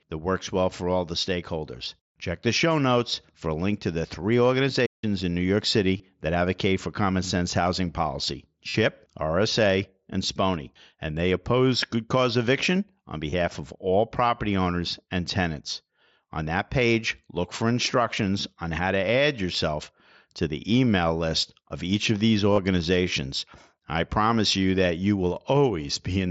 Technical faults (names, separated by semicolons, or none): playback stall; concealed Bluetooth headset packet loss